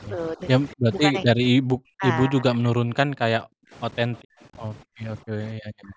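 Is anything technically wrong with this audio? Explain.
Yes. Two faults are audible.

Overdone noise removal runs throughout. An aggressive noise reducer cuts frequency bands near its noise estimate, so the background drops and breaks up into twinkling specks.

Speech suppressed in double talk occurs at 0.1 to 0.41 s, 0.74 to 3.73 s, and 4.09 s to the end. The speech dips by about 10 dB in the first stretch and by as much as about 40 dB in the later two. It loses its top or drops out in pieces, for roughly two seconds in the middle stretch and about one second near the end. The likely cause is an echo canceller that could not tell this talker from loudspeaker echo during overlapping speech, so it turned both down.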